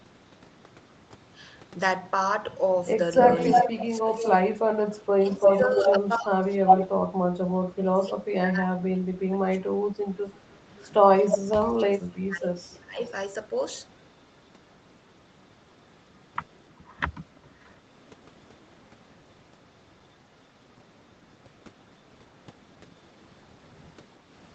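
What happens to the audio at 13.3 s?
An echo leak runs from 10.69 s to 13.94 s, so at 13.3 s a second copy of the speech trails the original by about 319 ms, only slightly quieter than the main signal. The likely cause is a far-end loudspeaker whose sound reached that side's microphone and was not fully removed by its echo canceller, so the residue was sent back into the call. The result is a smeared, doubled sound until the echo stops at 13.94 s.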